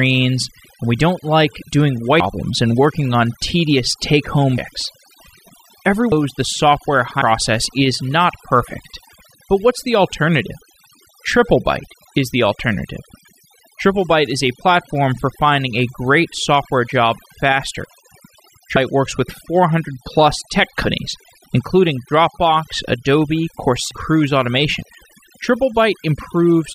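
Throughout, overdone noise removal pulls whole frequency bands down whenever they sit near the noise estimate, leaving a twinkling background. Compressed frames skipped at 2.20 s (between "we don't like doing" and "and working on tedious"), 4.57, 6.12, 7.21, 18.76 (before "works with"), 20.85 (after "plus tech"), 23.91 and 24.82 s: runs of frames, fitting roughly 26 ms each, never play. Each time the audio jumps ahead by somewhere between 0.15 and half a second, leaving a short smeared blip at each join.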